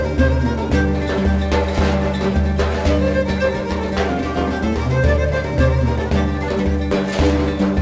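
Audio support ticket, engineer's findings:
Nothing to flag here: the audio sits fine through the call path, with the top end stopping around 8 kHz, which fits a wideband codec like G.722 doing its normal job.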